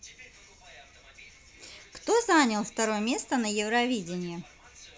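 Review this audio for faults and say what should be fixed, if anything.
Nothing here needs fixing, as the signal shows no audible technical faults at any point in the recording.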